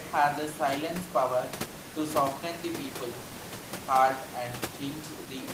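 Speech recording with no technical faults present.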